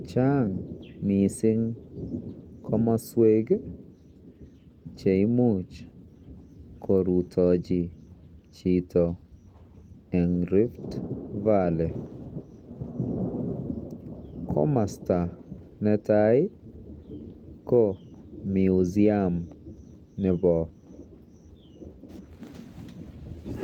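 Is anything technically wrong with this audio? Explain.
Yes, there are two related timing faults in this speech.

Clock drift between sender and receiver runs through the whole clip. The sender's clock is about 2 percent slow, so the receiver's buffer keeps draining and has to be topped up. You hear that as small, irregular timing hiccups rather than any tonal change.

Repeated timing corrections run from 0.78 s to 23.37 s. The receiver keeps repeating short slivers to cover the shortfall, which plays the speech at 98% speed and adds roughly half a second overall. The edits are unevenly spaced.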